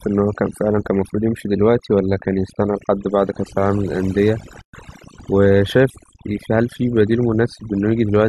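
From start to end, the speech carries overdone noise removal. The noise reduction was set too strong. It cuts single frequency bands far down, or out entirely, whenever they sit near its noise estimate. Quiet parts of the voice fall below that line and vanish too. The background drops, breaking up into twinkling specks.

At 4.61 s the sound stops dead. This is a gap at a join of encoded pieces. It lasts about 120 ms, until 4.74 s. Each piece was encoded separately, then joined untrimmed. The encoder's start-up delay and last-frame padding both stayed in as silence. The codec smears the edges, so the silent part is shorter. The speech then resumes where it left off. Such joins recur every 6.0 s, so only this one falls within the clip.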